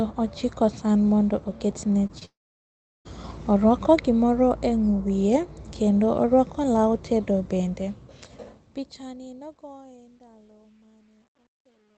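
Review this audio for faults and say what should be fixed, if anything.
Short concealed packet loss: two packets of about 20 ms each reached the decoder too late, at 2.07 to 2.11 s and 2.19 to 2.23 s, right after "ochiko san mondo oketne". The receiver filled each gap by extending the preceding sound, which leaves two brief smeared wobbles in quick succession. A deeper jitter buffer, or forward error correction on the Opus stream, would absorb losses this short.

Long network dropout: the likely cause is that the connection stopped delivering audio from 2.25 to 3.07 s, about 0.8 s, just after the same phrase. Concealment stretches the last sound into a fading buzz, then about 0.72 s of near silence follows before the audio resumes, with that stretch lost. A more stable network path or redundant transmission would prevent a gap this long.

Truncation distortion on a fade: the volume stage handling the fade-out, which starts at about 7.4 s, drops resolution without dither, which fits a 10-bit stage. 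From 7.44 s to the end the quiet tail turns grainy, and from 9.04 s the grit is at its worst. Processing the fade at full resolution and applying dither before any reduction in word length would prevent this.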